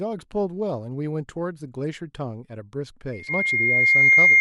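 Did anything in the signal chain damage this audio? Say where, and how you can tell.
Yes. From 3.13 s to the end, a loudspeaker feedback squeal takes over. It is a single tone at 2.1 kHz. It swells over roughly two seconds to about 15 dB above the speech. The damage is in the analogue stage. A microphone is hearing the loudspeaker it feeds, and at 2.1 kHz the loop gain exceeds one.

Between 3.27 and 3.33 s, inside the squeal, the sound jumps abruptly forward with a small blip. This is likely a stream segment skipped at the network or playback stage. One segment failed to arrive, and the player carried on with the next one.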